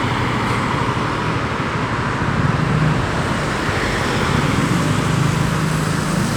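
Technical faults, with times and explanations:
No technical faults detected.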